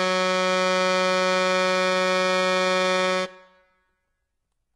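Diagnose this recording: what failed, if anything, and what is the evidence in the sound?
The damage sits at the codec stage and runs through the whole piece of music: heavy HE-AAC compression is the likely cause. Nothing survives above 11.8 kHz, yet the upper band is still filled in rather than empty, because it is rebuilt from copied lower bands instead of coded. That separates it from a plain low-pass or band-limited channel. The grit and misaligned, metallic treble fit a very low bitrate, around 16 kbps.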